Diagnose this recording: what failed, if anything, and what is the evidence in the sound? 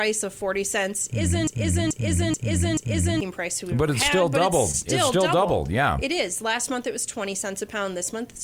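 A broken-record loop runs from 1.47 to 3.21 s: a 0.43 s fragment plays four times back to back, identically, and the audio meant for that span is gone. The likely cause is a stalled player or stream buffer resending its last block. Spectrogram and waveform show identical repeating tiles.

At 4.71 to 4.75 s there is short concealed packet loss on the network path. About 20 ms never arrived, and the decoder filled roughly 18 ms by extending the preceding sound, heard as a brief smear. On a spectrogram it appears as a narrow stretched band with softened transients.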